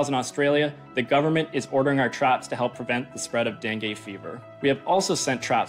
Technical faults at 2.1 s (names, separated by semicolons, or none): none